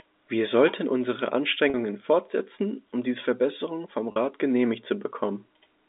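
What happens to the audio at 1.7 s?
Packet loss with pitch repetition, 1.70–1.74 s after "sollten unsere": repeating the last pitch period fills the 40 ms gap, a brief buzz seen as identical repeated waveform cycles.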